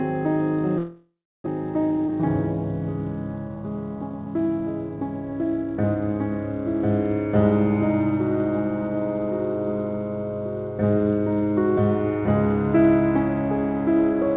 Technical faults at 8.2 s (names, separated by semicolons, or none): none